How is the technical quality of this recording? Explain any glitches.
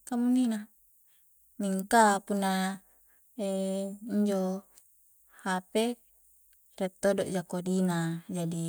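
No technical faults can be heard in the recording. There are no glitches to explain.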